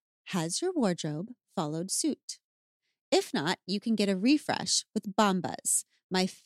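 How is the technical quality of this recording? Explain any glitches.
Nothing in this recording stood out as a glitch on listening.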